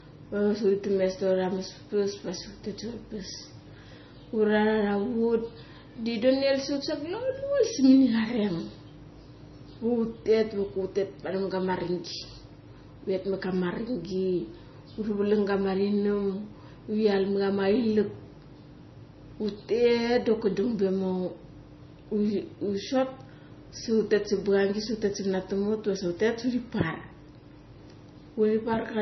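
Low-bitrate audio saved at a high bitrate, throughout this speech: nothing sounds above 6 kHz, likely from an earlier MP3 near 24 kbit/s that high-bitrate re-encoding cannot restore.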